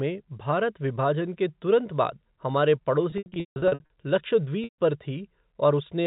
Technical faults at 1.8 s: none

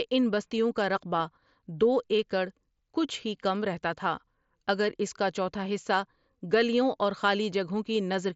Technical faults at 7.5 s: none

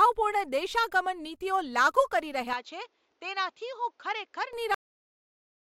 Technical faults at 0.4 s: none

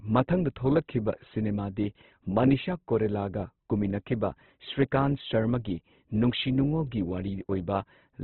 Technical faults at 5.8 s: Opus compression

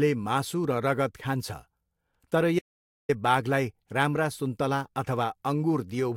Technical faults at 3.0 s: audio dropout to silence

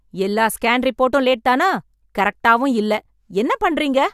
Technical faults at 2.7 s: none

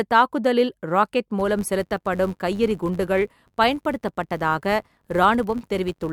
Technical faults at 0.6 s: none

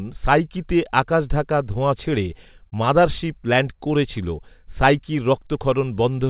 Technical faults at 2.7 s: short concealed packet loss

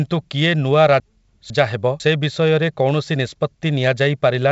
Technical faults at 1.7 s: chunks out of order

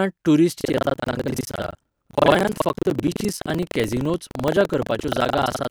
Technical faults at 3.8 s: buffer tearing

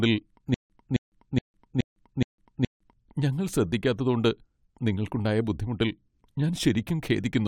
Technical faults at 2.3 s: stutter with silent gaps

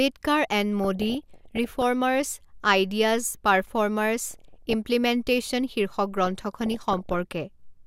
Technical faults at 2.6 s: none

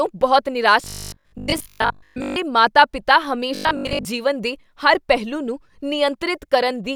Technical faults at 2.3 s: robotic sound from repeated short buffers

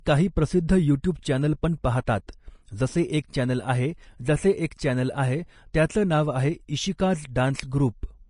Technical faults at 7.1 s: Vorbis compression

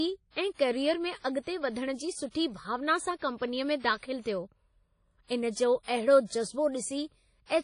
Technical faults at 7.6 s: WMA compression

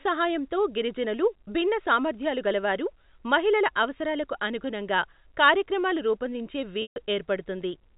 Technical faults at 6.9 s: packet loss with pitch repetition

